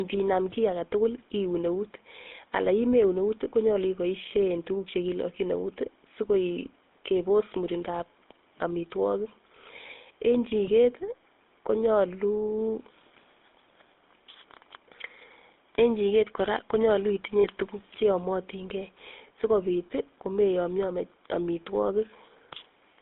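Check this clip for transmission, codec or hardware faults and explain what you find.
Two faults are present: the speech has gone through a GSM full-rate codec for the whole clip, and a short dropout of lost GSM frames occurs near 17.4 s.

GSM full-rate codec, throughout: the speech is rebuilt from a vocal-tract model driven by sparse, regular pulses, in a band of about 250 Hz to 3.6 kHz consistent with 13 kbps full-rate coding. This gives a plainly audible buzzy, gravelly roughness.

Lost GSM frames, 17.40 to 17.46 s: about 40 ms of damaged frames, pointing to two frames, were filled by repeating the last good frame. The result is a brief rough, metallic ring held over the gap.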